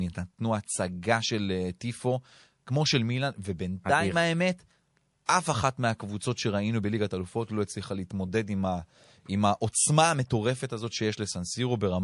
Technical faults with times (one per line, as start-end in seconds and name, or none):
0.00-12.03 MP3 compression
5.26-5.29 pre-echo